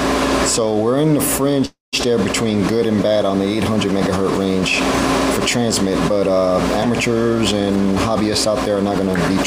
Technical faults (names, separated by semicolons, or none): call audio freeze; jitter buffer speed-up